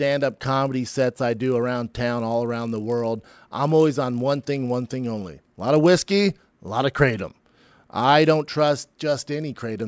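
Right from the start and all the way through, there's a 50 Hz buzz riding on the speech. It's a resampler restarted on every block: the audio was cut into 20 ms chunks and each one was converted on its own, apparently down from 24 kHz to 16 kHz. At every chunk edge the filter was missing its real neighbours, so a tiny error lands there, fifty times a second. It sits under the speech and drops away in the gaps.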